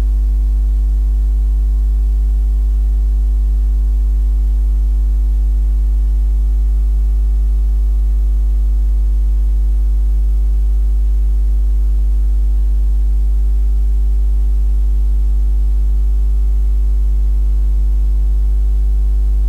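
No technical faults are audible.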